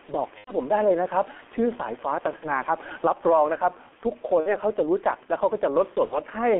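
Throughout the speech, G.723.1 coding confines it to roughly 250 Hz to 3.4 kHz, and its sound points to a bitrate near 6 kbit/s: muffled, hoarse and smeared. Gain pumping also runs throughout, with the level breathing by a few decibels, likely from an over-driven input caught by a fast limiter. At 0.38–0.53, 2.36–2.51, 4.40–4.55 and 6.05–6.20 s, VoIP packet loss concealed by the speech codec covers gaps of about 60 to 90 ms. In each one, the decoder stretches the last sound into a fading buzzy tone or coloured noise, and the voice stays weak or distorted for a moment after the packets return.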